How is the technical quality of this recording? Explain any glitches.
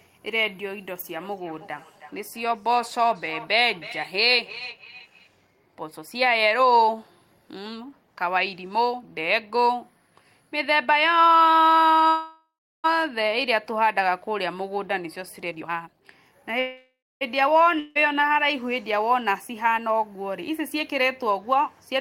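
The recording has several network and call-path glitches, concentrated in the first five seconds and between 12 and 18 seconds.

From 1.18 to 5.3 s there is feedback echo between two devices. A second device in the room replays the call, and this microphone picks it up again beyond its echo canceller's reach. Each sound returns roughly every 0.3 s, peaking at about 17 dB below the speech.

At 12.07 to 12.86 s and 16.60 to 17.23 s there are call audio freezes, likely from delayed packets draining the jitter buffer. The last sound stretches into a fading buzz or hiss, leaving about 0.35 s and 0.27 s of silence. Speech then resumes intact, 0.76 s and 0.61 s later.

From 15.45 to 16.51 s there is a jitter buffer speed-up. An overfull buffer was trimmed by cutting short pitch-period slices, about 0.7 s in total. Speech runs at 162% speed with unchanged pitch and sounds hurried.

At 17.79 to 18.01 s there is a long network dropout, likely from a 0.16 s stretch of packets that never arrived. 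A brief fading fill covers the gap, and the audio jumps ahead without the missing piece.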